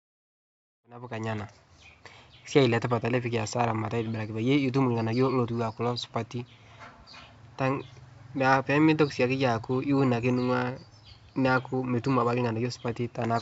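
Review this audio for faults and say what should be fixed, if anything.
Nothing here needs fixing. The speech has the 7 kHz ceiling of G.722 wideband telephone coding at 64 kbit/s, and it fades in smoothly from about 1 s to full level at 1.5 s.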